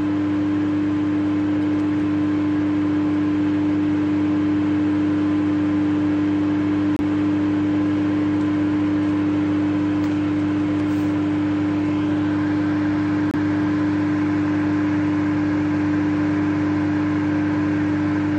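The whole clip has been squeezed through a lossy encoder, likely MP3 at a low rate that fits about 64 kbps, and the damage is plainly audible: weak high detail flickers in and out so the sound turns watery and swirly, with metallic chirps on bright, noisy parts and softened attacks. The chunks out of order fault occurs three times. Blocks of about 200 ms were written late and played after material that should have followed them. Between 1.4 and 2.0 s, one block lands two blocks late. Between 10.4 and 10.8 s and between 16.6 and 17.0 s, a block is one block late. Nothing is missing, but each of these moments sounds jumbled, with hard joins where the misplaced block is spliced in. The corrupt frame decoded fault also occurs three times. Damaged bits in a compressed frame were decoded anyway, so energy landed at the wrong frequencies for the length of the frame. A single frame at 1.63 s gives a faint blip, well down at around -30 dBFS and buried inside the first reordered stretch. 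A couple of frames between 6.96 and 7.00 s, and one frame between 13.31 and 13.36 s, produce much louder squeaks or noise bursts, peaking near -10 dBFS.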